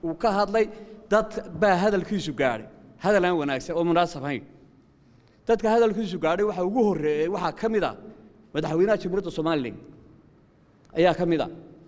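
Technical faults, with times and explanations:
Nothing stood out on listening; no technical faults could be heard anywhere in the clip.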